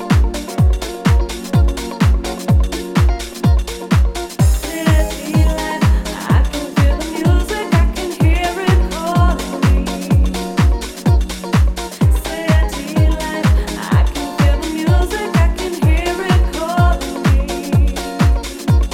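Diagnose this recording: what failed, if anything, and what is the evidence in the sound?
Nothing stood out on listening that would point to a failure at any stage of the chain.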